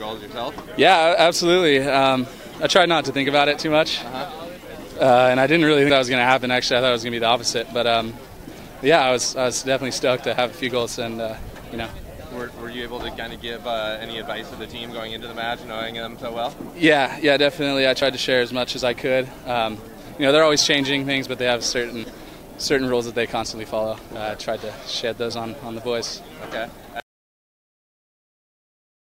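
Samples were likely overwritten before being read, a dropped buffer (overrun), so audio is lost and the edges are butted together: at 5.9 and 22.04 s about 70 ms vanishes, at 11.38 and 18.02 s about 20 ms, each heard as the sound jumping ahead.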